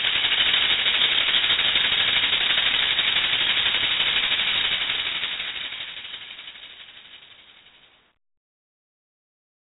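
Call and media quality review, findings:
4-bit ADPCM compression, entire music clip. Heavy damage: gritty hiss riding every loud passage, distorted attacks where the step size lags transients, dull top end. Spectrogram shows a broadband noise floor that tracks the signal level and a hard ceiling at 3.8 kHz. The sound fits a 32 kbps stream.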